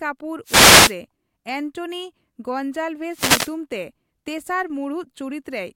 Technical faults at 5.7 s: none

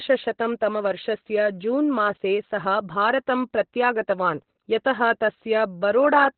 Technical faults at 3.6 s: Opus voice compression

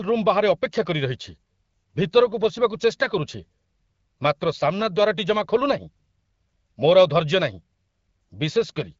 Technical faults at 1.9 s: none

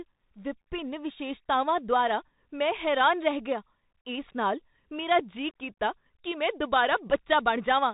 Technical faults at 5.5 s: Bluetooth CVSD headset codec

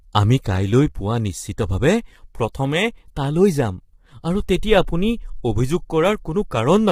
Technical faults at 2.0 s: low-delay AAC compression

